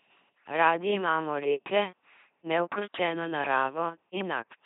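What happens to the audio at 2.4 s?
LPC-10 vocoder coding is present at 2.4 s, as it is across the whole clip. Each short frame of speech is rebuilt by a ten-pole vocal tract filter excited by either a pulse train or noise, never a mix. That gives the voice a heavy buzzing, robotic timbre with stray buzz or hiss where the voiced/unvoiced choice misfires, which fits a 2.4 kbit/s stream. Nothing above 3.8 kHz survives, so the sound is dull as well as mechanical.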